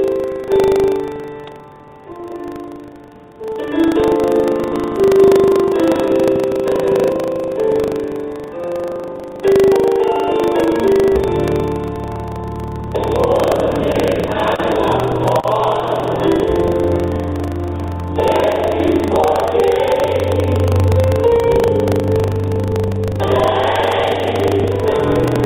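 Buffer tearing runs through the whole clip: a steady rattling buzz at 25 Hz that rides only on the sound itself. The writer and reader of the output buffer have slipped past each other, so a small slice of every period, which fits a 40 ms period, is replaced with audio from roughly 70 ms earlier, hard-spliced in at both ends.

A doubled audio track appears from 4.73 s to 7.09 s. A second full-band copy, at about the same level as the original, trails it by roughly 150 ms, cutting in and out abruptly with no reverberant tail, and likely comes from a slower second capture path mixed into the output. Both copies share the band limit of the call path, with nothing above 4 kHz.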